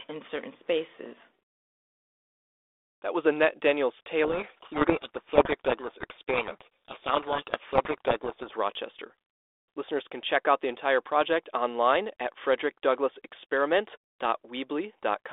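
A codec payload misread, where the two ends disagree on the bit order of G.726 code words, buries the speech in harsh distortion from 4.24 to 8.53 s, over telephone-band audio that fits 32 kbit/s G.726.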